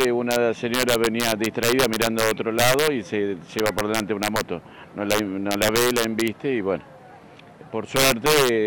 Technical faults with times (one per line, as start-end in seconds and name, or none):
0.00-8.67 integer overflow